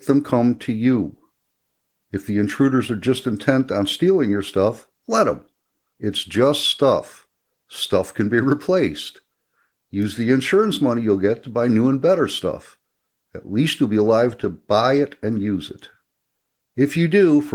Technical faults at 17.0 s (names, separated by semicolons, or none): none